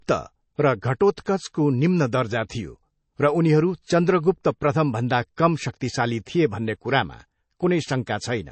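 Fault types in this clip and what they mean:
MP3 compression: The speech has nothing above 8.3 kHz and a plainly audible watery, swirling texture from weak frequency lines dropping in and out, likely from MP3 encoding at a low bitrate near 32 kbps. Unlike a simple low-pass filter, the damage shifts from moment to moment.
Pre-echo: A short hiss of about 10 to 12 ms is smeared just ahead of sharp onsets at 1.16 s, 5.36 s and 5.80 s, the last between "प्रथमभन्दा कम" and "थिए भन्ने". It comes before the attack rather than after it, unlike reverb or ringing.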